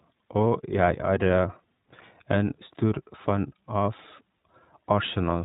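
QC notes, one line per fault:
throughout: iLBC codec. Nothing above 4 kHz comes through, so the speech is narrowband and dull at the top, with plainly audible coding damage: a rough, slightly synthetic texture. The codec rebuilds each short block of the excitation on its own, without carrying detail from the previous block. The sound points to iLBC's 15.2 kbps mode with 20 ms frames.
1.28–1.30 s: lost iLBC frames. A 20 ms stretch is briefly replaced by a held, slightly buzzy tone, where the decoder repeated the last pitch cycle mixed with noise to fill the gap. The gap is short, so no fade-out is heard. The duration fits a single lost frame. Because each iLBC frame decodes without depending on the previous one, the voice is correct again right after the gap, with no smeared recovery.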